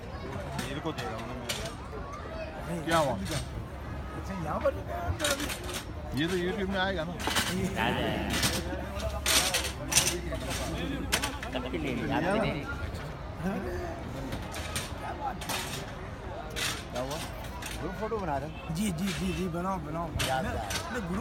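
From 7.29 s to 14.47 s the audio carries a doubled audio track: a second full-band copy of the same sound runs around 100 ms behind the original, at roughly 5 dB below it. The copy has no decay or room colouring, so it reads as a hard slapback rather than reverb, and it switches in and out abruptly at both ends. The likely cause is the signal being captured a second time through a slower path.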